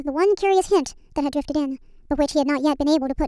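From start to end the speech runs at a wrong sample rate: it plays 1.5 times too fast and about 7 semitones high, which fits 16 kHz material played back at 24 kHz without conversion. Voices sound hurried and thin, with speed and pitch shifted together.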